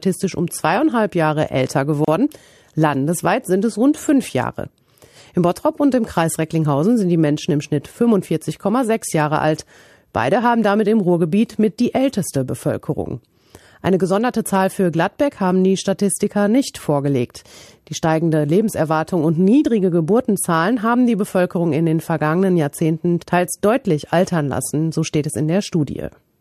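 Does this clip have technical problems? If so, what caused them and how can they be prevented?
Yes. At 2.05 s the speech drops out for a 32 ms silence that ends at 2.08 s. It has smeared edges, and the sound resumes exactly where it stopped. This is a gap at a join of encoded pieces. The audio was encoded in separate parts and spliced without trimming, so one part's padded final frame and the next part's start-up encoder delay both remain as silence at the seam. To prevent it, encode the audio in one pass, or trim each piece's encoder delay and padding before joining.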